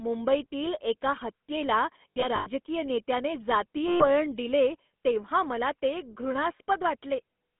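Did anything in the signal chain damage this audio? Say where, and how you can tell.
Yes. The codec stage damaged it throughout. This speech carries the buzzy, gravelly roughness of the GSM full-rate codec, plainly audible across the whole clip. The band runs only from 200 Hz to 3.5 kHz. The coder models the vocal tract and excites it with sparse, regularly spaced pulses. That coarse excitation is what makes the voice sound rasped. The character fits a 13 kbps full-rate stream.

The network stage added lost GSM frames at two points. From 2.11 to 2.48 s, after "मुंबईतील एका हत्येला" and before "नेत्याने जातीय", gaps totalling 180 ms are scattered over about 360 ms. The longest run is roughly a tenth of a second. From 3.88 to 4.05 s, before "दिले तेव्हा मला ते", 120 ms drops out. In each gap the decoder repeats the last good frame, so the sound hangs as a rough metallic ring.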